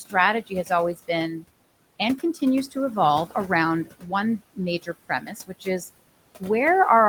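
Noise suppressor artifacts run through the whole clip. The room noise sits about 17 dB below the speech, and the suppressor pulls it down by about 21 dB in the gaps, then lets it back up under each phrase. Because this gain is worked out band by band and frame by frame, the leftover background does not stay steady.

Speech cut by the noise suppressor happens four times, where the suppressor mistakes quiet parts of the speech for noise and turns them down along with the background. From 0.47 to 0.70 s, short stretches fall by up to about 15 dB. From 1.32 to 1.44 s, just before "and continues to evolve", the drop reaches about 13 dB. From 3.85 to 4.12 s, just after "and continues to evolve", it reaches about 15 dB. The longest is from 4.82 to 5.81 s, where roughly 0.4 s of sound dips by up to about 18 dB. Each sounds swallowed or faint.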